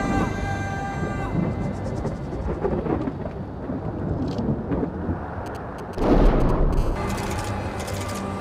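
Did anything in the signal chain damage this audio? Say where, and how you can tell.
Yes. GSM signalling bursts, 5.46 to 6.75 s: galloping ticks and short 217 Hz buzzes, roughly 20 dB down, as analogue wiring rectifies a nearby phone's radio bursts.

GSM phone buzz, 6.77 to 8.35 s: a steady, raspy 217 Hz buzz about 30 dB below the signal. The same analogue pickup continues once the phone enters a call.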